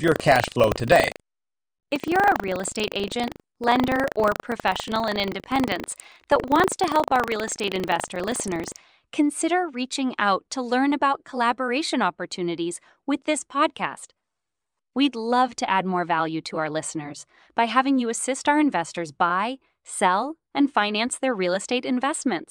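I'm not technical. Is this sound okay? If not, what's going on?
No. From the start to 8.76 s the speech has a robotic, rattling buzz about 25 times a second. This is buffer tearing: the playback system reads its audio store out of step, so a small slice of each chunk repeats sound from a split second earlier.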